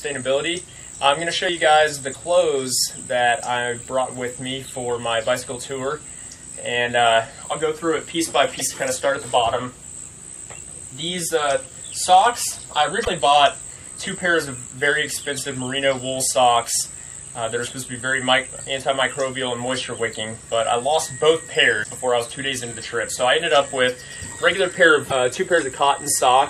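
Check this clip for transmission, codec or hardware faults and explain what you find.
There is one kind of fault: damaged data in a compressed stream. Short blips occur at 2.10–2.16, 8.56–8.61, 13.02–13.08, 21.80–21.86 and 25.07–25.12 s, each under 60 ms. Corrupted bytes make the decoder misread frames and lose sync until it finds the next header.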